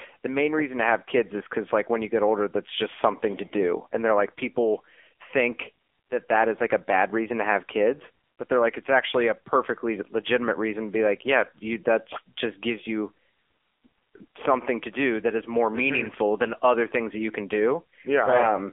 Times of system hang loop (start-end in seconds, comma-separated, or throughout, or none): none